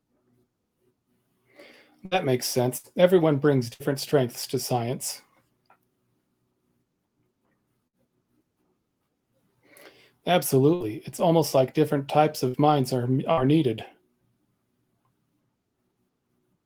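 Bursts of packet loss at 2.05, 2.77, 3.74, 7.87, 10.75, 12.48 and 13.32 s each replace about 60 ms of speech with a fading extension of the preceding sound, then resume.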